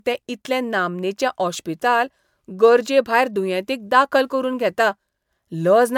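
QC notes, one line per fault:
Throughout: generation loss, swirly hollow speech and blurred attacks despite full 20.1 kHz bandwidth, likely from about three MP3 passes near 128 kbit/s, not one starved encode.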